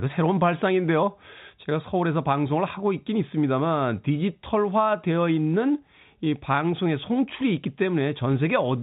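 No technical faults are audible.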